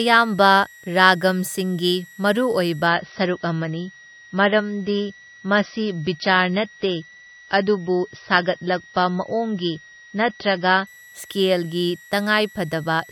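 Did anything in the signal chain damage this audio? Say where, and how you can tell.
Yes. In the analogue power stage, a switching supply whistle runs throughout: a high tone wandering between 1.89 and 1.96 kHz, about 25 dB below the speech, from a regulator's audible switching.

At the network stage, the adaptive stream dropped to a lower bitrate from 2.87 to 10.87 s. The treble cuts off abruptly above 5.9 kHz, pointing to a step from roughly 128 kbit/s MP3 down to 24 kbit/s.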